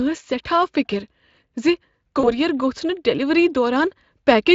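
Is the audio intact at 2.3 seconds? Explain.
No. VoIP packet loss concealed by the speech codec affects 2.19 to 2.32 s. About 40 ms of audio went missing, which fits two lost frames. The decoder filled the gap by extending its last pitch and filter at falling gain, so the speech smears into a buzzy tone or coloured noise that fades, and stays weak or distorted for tens of milliseconds or more after packets return.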